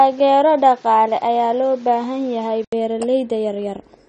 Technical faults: AAC compression; input switched to a poorer device

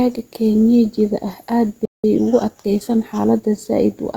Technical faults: playback stall; time-compressed catch-up

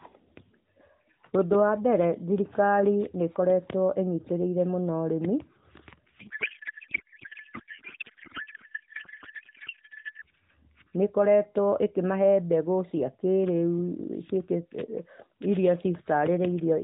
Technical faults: codec payload misread

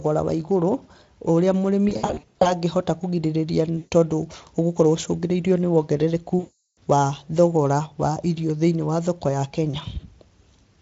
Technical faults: VoIP packet loss concealed by the speech codec

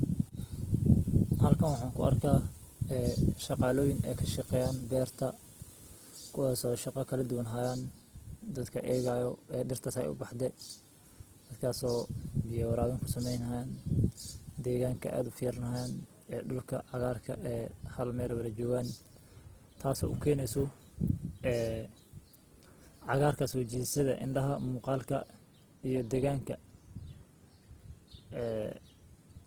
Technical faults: Opus compression

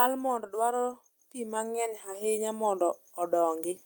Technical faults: automatic gain rising

